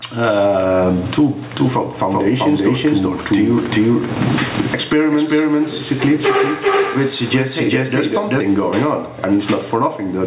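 From the start and lasting the whole clip, there is gain pumping. The gain swings by around 20 dB, pulling loud and soft parts closer in level and squashing the sound. Unlike a noise gate, which would silence the gaps, this pulls the gain down on loud sounds. The likely cause is gain set far too high with a fast limiter pulling it down.

From 2.11 s to 8.41 s, a doubled audio track appears. A second full-band copy, roughly as loud as the original, trails about 0.4 s behind, starting and stopping abruptly at those points. Unlike an echo or reverb, it has no decay or room colouring. It was likely captured a second time through a slower path, or left as two out-of-step copies in an edit. Throughout, the narrowband call path leaves nothing above 4 kHz.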